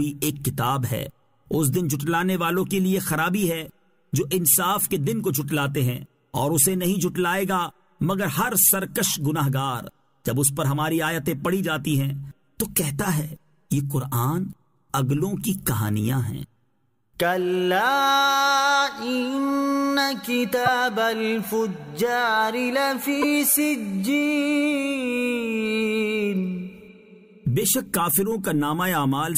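The audio breaks up twice, at 20.65 to 20.68 s and at 23.21 to 23.24 s, each about one 26.1 ms frame long, where it jumps ahead with a short glitch. This is likely a broken MP3 bit reservoir: after missing frames, the next frame reads borrowed bytes from the wrong data. A plain dropout would leave a clean gap, but here the sound skips forward with a brief glitch.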